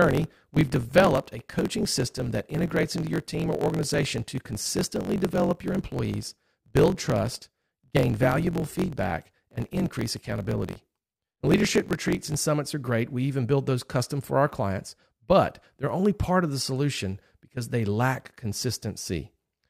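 Block size mismatch (truncated), from 0 to 12.4 s: the next stage reads fewer samples than each write, which fits 1024-sample blocks, so every block's end is dropped. The speech buzzes at 45.9 Hz, the block rate, and runs 1.07 times fast at near-normal pitch.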